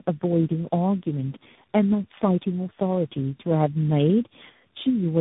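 Speech passed through tandem speech coding for its whole length. The sound is rough, muffled and warbly, with nothing above 3.8 kHz. The combination of artefacts fits a chain of G.729A, A-law G.711, AMR-NB, mu-law G.711 and finally CVSD. That means three separate speech codecs, each re-encoding the decoded, already degraded output of the previous one. Their distortions compound beyond what any single link would produce.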